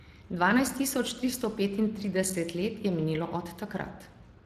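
The clip is speech carrying Speex codec damage from start to finish. The CELP coder lacks bits for the excitation, so voicing comes out noisy and hoarse, and the artefacts are plainly audible. The coder ran at about 22 kbps. Nothing is present above about 15.4 kHz.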